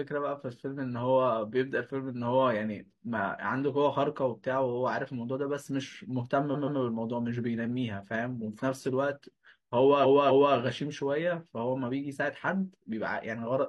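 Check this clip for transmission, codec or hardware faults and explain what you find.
Repeated frames stutter the speech at 6.51–6.76 s and 10.01–10.52 s, as 128 ms and 256 ms blocks each replay twice. Unlike a dropout, nothing goes missing: the speech simply lengthens.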